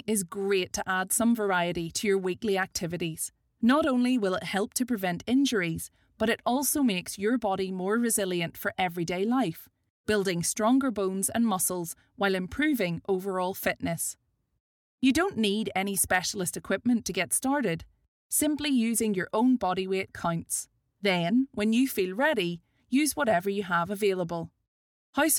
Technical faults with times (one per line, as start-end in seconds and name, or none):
none